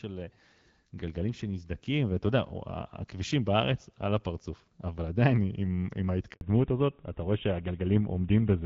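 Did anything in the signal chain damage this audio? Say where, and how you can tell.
Yes. At the network stage, a handover gap runs from 6.33 to 6.41 s. The call was passed between networks and no speech frames arrived for 80 ms, so the speech dies away abruptly and drops to silence until the new link starts carrying audio.

From 6.41 s to the end, the codec stage shows a fallback to narrowband. Before the switch, the wideband HD Voice sound reaches past 6 kHz and is consistent with AMR-WB near 12.65 kbit/s. After it, nothing remains above 4 kHz, and the speech turns duller and rougher, which points to GSM full rate.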